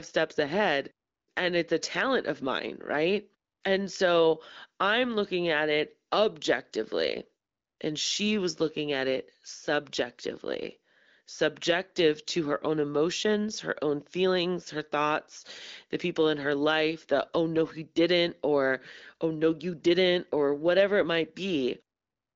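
Nothing stood out on listening to this speech, which reaches the ear through an AMR wideband (HD Voice) link with its content stopping at about 7.4 kHz.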